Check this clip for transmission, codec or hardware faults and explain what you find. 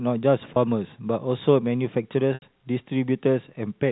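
Two gaps show packet loss with pitch repetition, heard over the narrow G.711 telephone band. At 0.54–0.56 s, a 20 ms loss fitting one packet, the receiver repeats the last pitch period and the sound briefly holds with a buzzy tone. At 2.34–2.42 s, 80 ms fitting about four packets, the repetition fades to silence before a short cross-fade back. A plain dropout would cut to silence with a click instead of a held buzz.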